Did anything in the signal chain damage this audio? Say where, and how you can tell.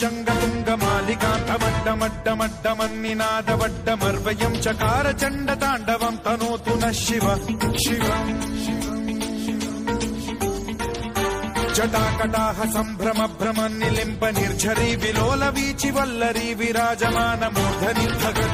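No, nothing in the signal chain stood out as damaging this audio on listening.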